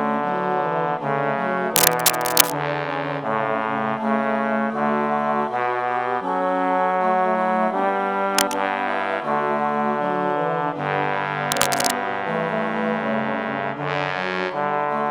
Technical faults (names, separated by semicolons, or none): cable scratch noise